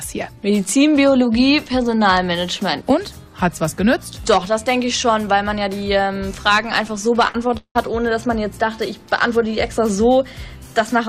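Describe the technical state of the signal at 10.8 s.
At 10.8 s the signal is intact, with no audible technical fault at that moment.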